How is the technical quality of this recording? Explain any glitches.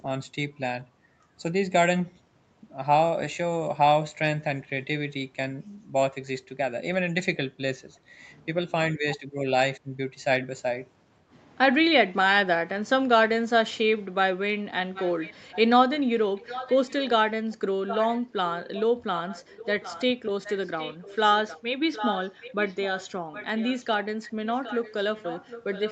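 The recording has two clear problems: brief dips in the speech around 9 seconds, and a trailing echo through most of the last ten seconds. The audio is band-limited to 8 kHz, as call microphone processing produces.

Speech suppressed in double talk occurs from 9.17 to 9.39 s and from 9.79 to 9.94 s. The level drops by roughly 10 dB and then 15 dB, so the speech briefly dips. The likely cause is an echo canceller that, with both sides talking at once, mistook the local speech for loudspeaker echo and attenuated it. On a waveform these show up as sudden short pinches in the envelope. A spectrogram shows brief fades across the band.

Echo leak appears at 14.94–15.61 s, 16.35–17.09 s, 17.52–20.05 s and from 20.43 s to the end. A fainter copy of the speech follows 762 ms behind, at about 15 dB below the main signal (about 10 dB in the second stretch). This is likely residual echo that the far end's canceller let through from its loudspeaker. 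On a spectrogram the harmonic patterns repeat, shifted 762 ms later and paler.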